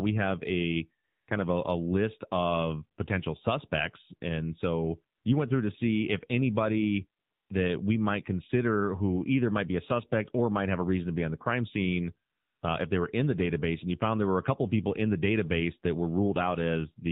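Throughout, the speech carries AMR narrowband mobile codec damage: buzzy, synthetic vocal tones, and a spectrogram that stops abruptly at 4 kHz. The buzziness fits a low bitrate near 7.4 kbps. AMR comfort noise fills the gaps at 1.04–1.28 s, 5.16–5.24 s, 7.2–7.5 s and 12.3–12.62 s, lasting 240, 80, 300 and 320 ms. Speech frames stopped there, and smooth synthetic hiss replaced them. On a spectrogram each gap shows as a flat, featureless band, and on the waveform as a uniform low-level block with hard edges.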